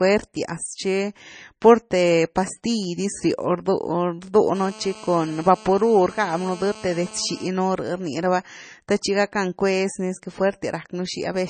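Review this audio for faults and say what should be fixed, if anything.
Throughout the speech, nothing is present above 9 kHz, and the smeared, watery coding artefacts of a heavily compressed MP3 remain despite the large file. The likely cause is low-bitrate audio saved at a high bitrate: the sound fits an earlier encode of roughly 27 kbit/s later re-saved at 192 kbit/s, which preserved the damage without restoring anything. To prevent it, encode once from the original uncompressed source.

From 4.55 to 7.48 s, GSM phone buzz appears as a hard, raspy tone at 217 Hz, rich in harmonics and about 20 dB below the speech. It holds steady, as a handset on a call does, with its burst transmissions being rectified by the audio circuitry. To prevent it, keep mobile phones away from the microphone, cables and interface, or switch them to flight mode while recording.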